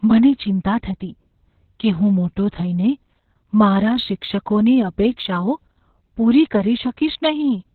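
The clip is speech. Opus voice compression runs throughout. Nothing is heard above 4.4 kHz, and the speech is muffled, hoarse and robotic, which fits a narrowband SILK mode at about 6 kbps. From 3.71 to 5.94 s, sample clock jitter adds a faint hiss and roughness. The timing wobble is under a microsecond, leaving error about 50 dB below the signal.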